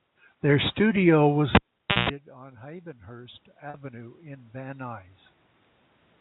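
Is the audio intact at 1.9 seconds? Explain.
No. From 1.55 to 2.09 s a cable pulled and plugged in drops the sound for about 0.49 s, with pops at each end and a 60 Hz mains buzz lasting 173 ms, seen as a flat waveform and a bright low horizontal line. Packet loss with pitch repetition follows at 1.92 to 1.96 s, a 40 ms gap, which fits two lost packets. It is bridged by a repeated, fading pitch period that shows as regular copied cycles in the waveform.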